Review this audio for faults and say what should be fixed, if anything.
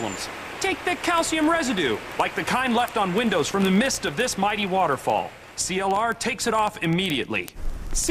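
Word clock ticks run from 0.12 s to 8.08 s: sharp clicks of uneven strength at a steady rate of roughly one every 40 ms, around 200 in total. The receiver's clock runs roughly 500 ppm off the sender's, so each slip drops or repeats one sample. To prevent this, slave the receiving device to the incoming digital stream or to a shared word clock.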